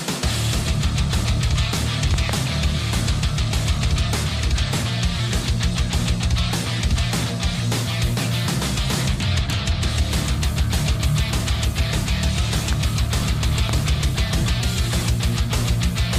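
A double loud pop arrives between 2.14 and 2.31 s. Two sharp hits sit close together. Single pops follow at 12.73 s and 13.69 s. Each one peaks roughly 10 dB above the surrounding sound. The sound keeps running underneath every pop. A sudden voltage step, likely from a plug, switch, static discharge or driver glitch, has been added to the signal. The circuits after it shape that step into a brief thump.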